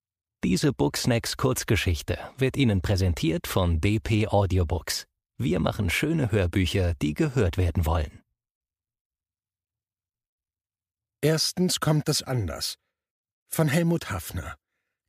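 A speech recording with no audible technical faults.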